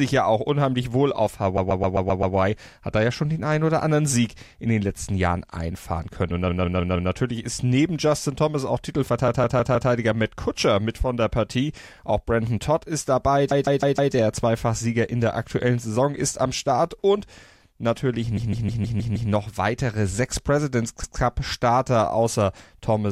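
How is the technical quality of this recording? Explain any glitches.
Repeated frames mar the recording: short runs of compressed frames were played again, so a block of about 131 to 157 ms loops, stuttering and lengthening the speech. It happens at 1.57 to 2.35 s after "auch unheimlich wohl auf" (six extra plays), 6.48 to 7.11 s, 9.28 to 9.90 s after "ist auch", 13.51 to 14.14 s after "ist dabei", 18.37 to 19.31 s (six extra plays), and once at 21.03 s.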